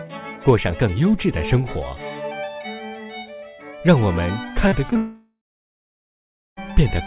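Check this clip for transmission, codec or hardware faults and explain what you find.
There are two kinds of transmission fault, both clustered in the second half of the clip. The call path itself shows nothing above 4 kHz, which fits narrowband G.711 A-law coding at 64 kbps.

Short concealed packet loss occurs at 4.68–4.74 s, 4.90–4.94 s and 4.94–4.97 s. Each time, roughly 20–40 ms of audio failed to arrive and the receiver extrapolated from the preceding sound before blending back. The result is a brief smear or wobble rather than a clean gap.

A long network dropout follows immediately, from 4.97 s to 6.59 s, likely caused by a sustained loss of incoming packets. About 1.6 s of audio is gone. A synthesized continuation fades out, leaving roughly 1.2 s of silence, and the audio resumes further on without the missing portion.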